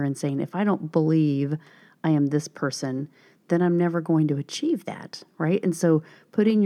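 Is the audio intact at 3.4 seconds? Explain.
Yes, at 3.4 seconds the speech plays through intact, with no dropout, click, distortion or other fault at that moment.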